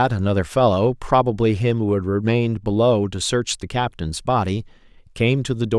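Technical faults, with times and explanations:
Nothing in this speech recording stands out as a technical fault. There are no events to mark with a time or explain.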